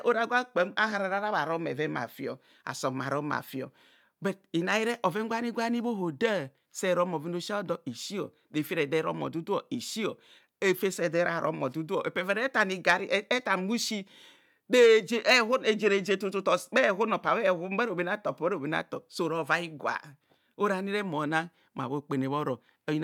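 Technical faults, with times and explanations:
No technical faults detected in the speech.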